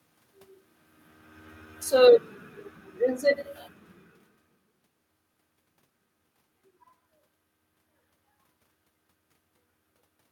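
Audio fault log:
1.93–4.79 s, automatic gain falling. The speech level sinks steadily by about 8 dB over nearly three seconds. The gain control judged the input too loud or its background noise too strong, and pulled its gain down gradually rather than all at once. The room noise drops along with the voice, which points to a gain change in the system. A talker moving, as happens near the start and around 4 s, would shift only the voice.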